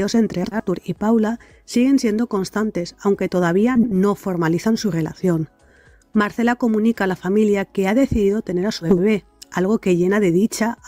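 Frames out of order at 0.44–0.65, 3.75–3.94, 5.69–5.86 and 8.82–8.99 s: two adjacent 80 ms blocks swap places, producing a garbled flutter, but no time lost.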